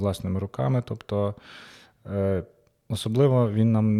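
No technical faults can be heard anywhere in the recording.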